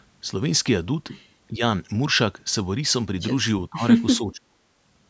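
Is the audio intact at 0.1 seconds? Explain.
Yes, the speech at 0.1 s is intact, with nothing wrong at that moment beyond the normal call microphone processing, whose high-pass filter trims the lowest bass.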